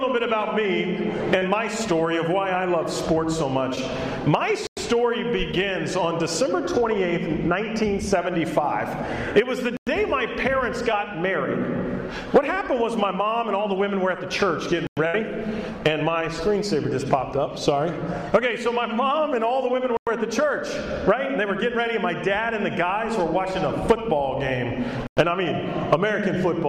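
At 1.38 to 1.42 s a short concealed packet loss occurs. About 30 ms of the stream never arrived in time, and the receiver bridged the hole by extending the preceding sound before crossfading back into real audio. It is heard as a brief smear. Similar but smaller concealments follow at 3.75 to 3.78 s and 5.52 to 5.54 s, each covering about 10 ms. Each of these is a quick wobble, not a clear dropout.

At 4.67 s the first gap between chunks appears: a 100 ms silence. The audio was delivered in 5-second chunks, and silence is left at each join. No content is removed, but the flow stops abruptly. The same hole recurs at 9.77 s, 14.87 s, 19.97 s and 25.07 s. That makes a regular stutter every 5.1 s.

Another short concealed packet loss sits at 10.92 s and is heard as a brief wobble.

At 15.07 to 15.15 s, just after the third chunk gap, a burst of packet loss removes about 60 ms of consecutive audio. 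The receiver synthesised a continuation of the last sound and faded it as the gap lengthened. The result is a held buzz or fading hiss, after which the audio jumps ahead with that stretch missing.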